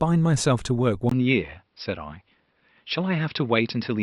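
At 1.09 s the recording's input was likely switched to a poorer device, such as another microphone or a headset's call profile. A gap of about 20 ms of silence marks the switch. From there to the end, the speech loses everything above 5.5 kHz and sounds duller and boxier. The loudness stays about the same, but a new, faint background noise appears, about 50 dB below the speech.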